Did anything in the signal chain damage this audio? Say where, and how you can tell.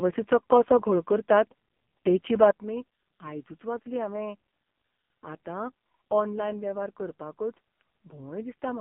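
Yes, at the codec stage: the AMR narrowband mobile codec runs throughout. The speech sits in a 150 Hz to 3.4 kHz phone band with nothing above 3.6 kHz, and it's heavily buzzy and synthetic, which points to a low AMR-NB mode, around 5.15 kbps.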